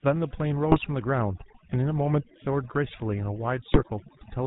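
Overdone noise removal runs throughout: frequency bands near the noise estimate are pulled down, leaving near-silent gaps with twinkling specks. The GSM full-rate codec damage is also constant and plainly audible, with nothing above 4 kHz and a buzzy, gravelly roughness consistent with a 13 kbps full-rate coder. GSM bit errors occur from 0.70 to 0.87 s and again from 3.72 to 3.82 s, where corrupted filter, pitch and gain values distort the spectrum into brief squawks and gargling. The lengths point to roughly eight and five damaged frames.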